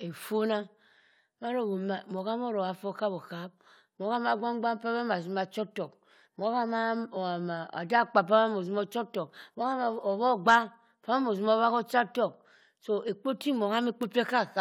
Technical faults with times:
none

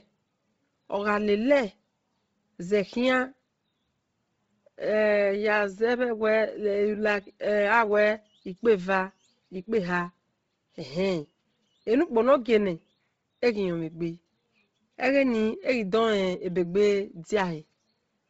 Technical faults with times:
0.00-18.30 Bluetooth LC3 compression
0.00-18.30 sample clock jitter

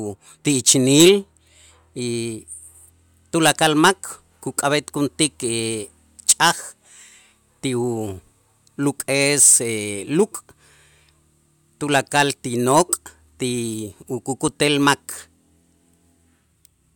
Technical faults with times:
none

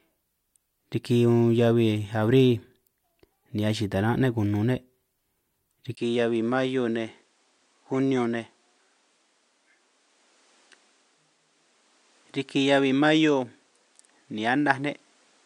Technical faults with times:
5.95-15.45 input switched to a poorer device

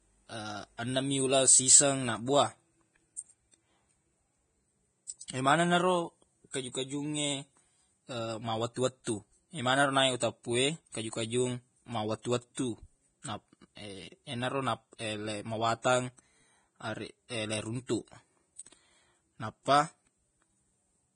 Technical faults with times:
0.00-21.15 Vorbis compression
6.51-6.54 pre-echo

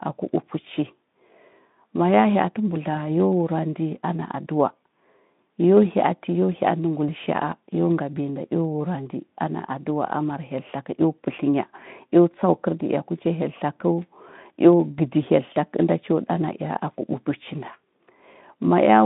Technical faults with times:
2.95-2.99 VoIP packet loss concealed by the speech codec

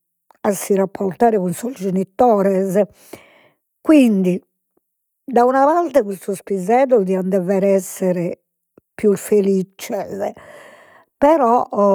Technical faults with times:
none

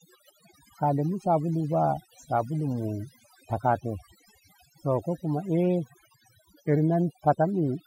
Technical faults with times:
0.00-7.86 overdone noise removal

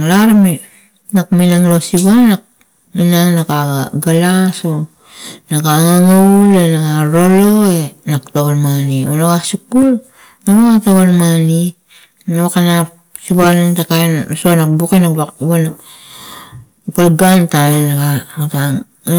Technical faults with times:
0.00-19.18 hard clipping

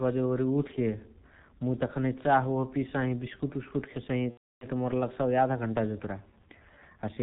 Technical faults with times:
0.00-7.22 G.723.1 codec
4.31-4.66 VoIP packet loss concealed by the speech codec

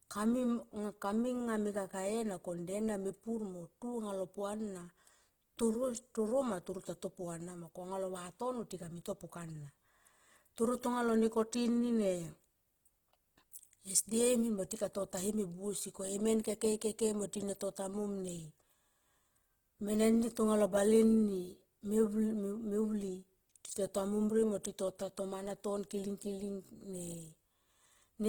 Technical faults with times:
0.00-28.28 Opus compression
0.12-28.28 clock slip clicks

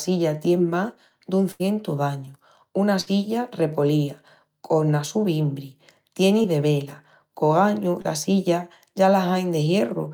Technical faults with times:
1.51-1.61 burst of packet loss
2.25-2.29 short concealed packet loss
3.01-3.08 burst of packet loss
6.42-6.46 short concealed packet loss
8.02-8.06 short concealed packet loss

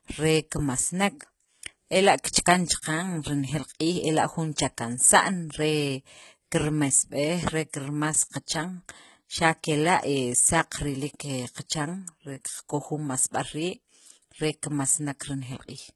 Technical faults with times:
0.00-15.96 HE-AAC compression
2.82 pre-echo

